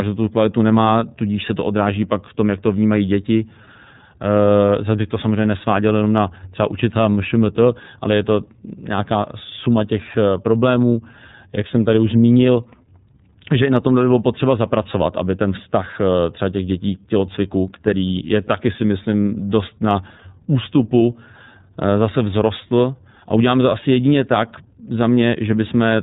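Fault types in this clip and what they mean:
iLBC codec: narrowband speech coding with nothing above about 3.8 kHz, a flat-topped spectrogram, and plainly rough, synthetic texture consistent with 30 ms frames at 13.33 kbps.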